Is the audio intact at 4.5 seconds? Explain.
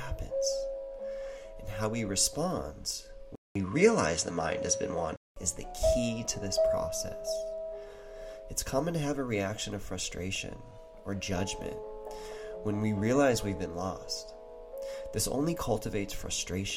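No. From 3.35 to 5.36 s the sound turns duller, with nothing above 11 kHz, a brief gap of 0.2 s, a small level shift and faint new background noise. This is likely an input switched to a poorer device.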